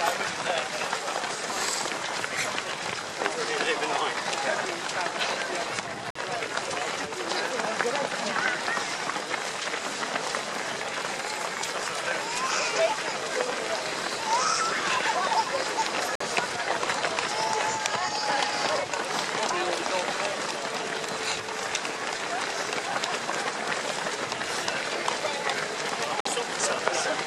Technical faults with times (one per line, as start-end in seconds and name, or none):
6.10-6.15 gap between chunks
16.15-16.20 gap between chunks
26.20-26.25 gap between chunks